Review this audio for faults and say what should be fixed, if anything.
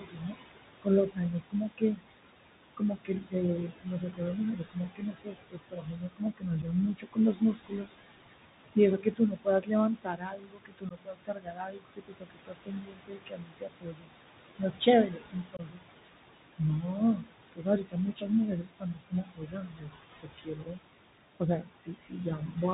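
The noise suppressor runs through the whole clip, pulling the steady background down by about 20 dB between phrases and letting it swell back under the speech. The room noise, sitting about 9 dB below the speech, is what it's working on. Dial the suppression back or give it a smoother, slower gain curve.

The whole clip also carries the Bluetooth CVSD headset codec, at 64 kbps. It cuts everything above 4 kHz, and its one-bit up-or-down steps scratch up the s sounds, distort loud bright moments and leave a grainy hiss under the speech, and that damage is plainly audible. Use a wideband Bluetooth profile (mSBC or LC3) instead of CVSD.

The suppressor also takes speech for noise in five stretches: 0 to 2.07 s, 2.77 to 7.91 s, 8.75 to 15.88 s, 16.58 to 20.8 s and 21.36 to 22.57 s. Quiet consonants and word endings drop by up to about 22 dB, adding up to roughly 11.4 seconds of swallowed, faint speech. 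Raise the suppressor's speech-protection threshold or lower its maximum attenuation.

There's unconcealed Bluetooth headset packet loss in three places. The first is a 7.5 ms hole at 6.62 to 6.64 s, which points to one lost packet. The second is 15 ms at 10.89 to 10.92 s, likely two packets, and the third is 22.5 ms at 15.57 to 15.6 s, about three packets. Each gap has abrupt edges. Improve the radio link or turn on packet-loss concealment.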